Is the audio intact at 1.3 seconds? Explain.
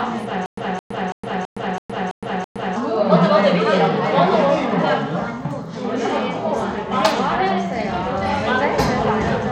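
No. At 1.3 s the sound sits inside a stutter with silent gaps running from 0.46 to 2.76 s. A burst of about 215 ms repeats seven times, each followed by about 115 ms of digital silence, a 330 ms cycle. This is likely a stalled stream replaying its last fragment on each retry, so the audio due in that span is lost.

Bluetooth SBC compression also colours this moment: there is plainly audible gritty, coarsely quantised texture with nothing above 17.1 kHz, which points to a low bitrate around 96 kbps and likely comes from an SBC link starving its upper sub-bands of bits.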